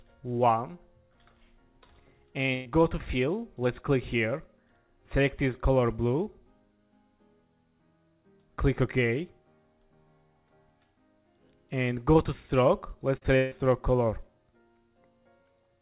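From 2.54 to 2.67 s the sound turns into a held buzz or hiss that fades across about a tenth of a second, then picks up further along as though a piece has been skipped. This is a burst of packet loss: roughly 120 ms of audio never arrived in time, and the receiver stretched out the last sound it had for about 113 ms. Because there is no gap of silence, the jump comes right after the fading tail. All of this is heard through a band that stops at 4 kHz, which fits a G.711 mu-law call path at 64 kbps.

At 13.17 s there is a brief smear lasting about 40 ms, and right after it, at 13.23 s, a second, shorter wobble. Both are short concealed packet loss. The first gap was about 40 ms, covered by roughly 39 ms of continued sound. The second was about 20 ms, of which only about 10 ms was filled before the receiver blended back into the real audio.

Just after, from 13.36 to 13.65 s, the sound again freezes into a decaying buzz or hiss for about 150 ms and never falls fully silent. 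It then resumes with roughly 160 ms of material gone, and the surrounding stretch runs about 8 ms longer than it should. This is most likely a long network dropout, in which the receiver kept extending the last sound it had until real packets arrived again.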